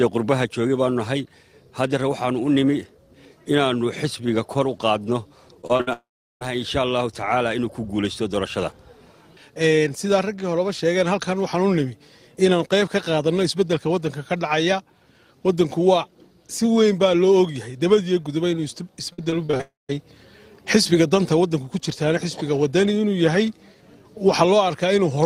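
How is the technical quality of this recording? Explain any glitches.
The recording has two network-related problems, each occurring twice.

Repeated packet loss (robotic sound) appears at 5.61–5.89 s and 19.13–19.93 s. Short gaps, up to about 57 ms, were concealed by continuing the preceding sound, producing choppy fragments with pieces missing.

Long network dropouts occur at 5.93–6.43 s and 19.61–19.95 s. A fading buzz gives way to silence lasting 0.37 s and 0.17 s, respectively, likely from audio that never arrived.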